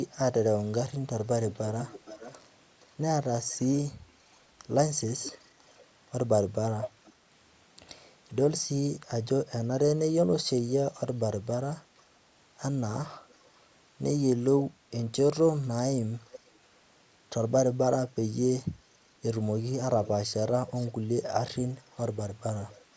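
Echo leak appears at 1.51–5.85 s, 6.82–7.13 s, 11.73–12.02 s, 13.29–13.6 s, 16.31–16.58 s, 20.04–20.92 s and from 21.96 s to the end. It is a delayed copy of the speech trailing the original, about 10 to 35 dB below it, with the lag creeping from 470 to 505 ms. The echo is most prominent near 7 s and faintest around 13 s. The likely cause is a far-end loudspeaker whose echo canceller let part of its microphone pickup return down the line.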